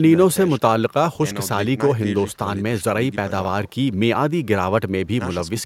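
No technical faults can be heard in this speech recording. There is nothing in it to place in time or describe.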